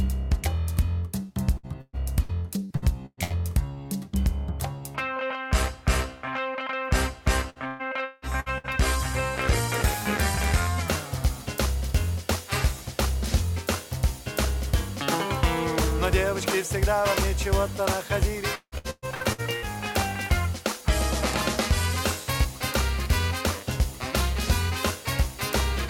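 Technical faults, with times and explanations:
1.57–3.33 s, 7.50–8.67 s and 18.55–19.65 s, repeated packet loss (robotic sound): a rapid series of holes in each stretch, the longest 119, 174 and 170 ms, each patched by extending the preceding sound. Those repeated fills, covering about 30 to 48 percent of each stretch, make the audio choppy, with pieces missing.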